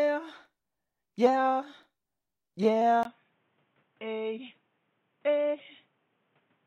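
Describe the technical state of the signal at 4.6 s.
At 4.6 s you're in the stretch where it sounds like the input switched to a poorer device, running from 3.03 s to the end of the clip. There's a brief 20 ms gap at the switch, then everything gets dull and boxy, with nothing above 3.8 kHz. The level drops by around 10 dB, and a new noise floor appears roughly 40 dB under the signal. That's likely a jump to another mic or a headset's narrowband call profile.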